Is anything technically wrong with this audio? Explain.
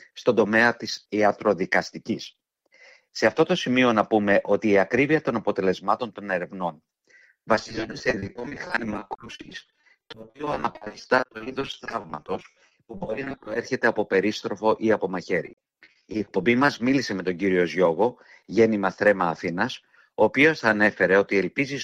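Yes, there is repeated packet loss (robotic sound) from 7.55 to 13.56 s and again from 15.46 to 16.90 s. Short holes of up to 40 ms are patched by stretching the preceding sound, covering nearly half the first stretch and about a quarter of the second. The result is choppy with pieces missing, unlike a single clean dropout.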